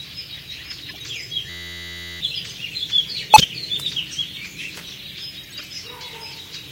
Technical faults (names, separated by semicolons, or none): corrupt frame decoded; system hang loop